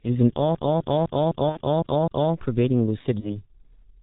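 The speech sounds muffled and hoarse from start to finish, with smeared consonants and nothing above 4 kHz. This is heavy G.723.1 codec damage: its 30 ms frames and slowly updated voice model discard detail, and the thin result fits its 6.3 kbit/s mode.

From 0.55 s to 2.33 s, the same quarter-second fragment, about 0.25 s long, repeats seven times in an even, rapid stutter, with a brief mute at each jump back. This is a CD stuck on one turn: a scratch sends the laser back one track at the same point on every revolution.

Within that stutter, from 1.49 s to 1.58 s, the sound briefly turns into a buzzy, fading drone. This is VoIP packet loss concealed by the speech codec. About 60 ms of audio went missing, consistent with two lost 30 ms frames, and the decoder filled the gap by extending its last pitch and filter at falling gain. At 3.20 s a single 30 ms dropout is bridged the same way, and the sound stays weak and distorted until about 3.40 s because each rebuilt frame feeds into the next.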